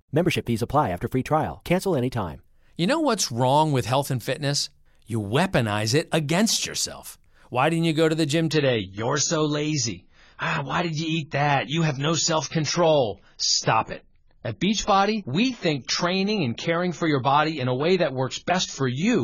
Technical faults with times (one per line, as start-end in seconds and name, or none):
8.52-19.23 adaptive stream at a lower bitrate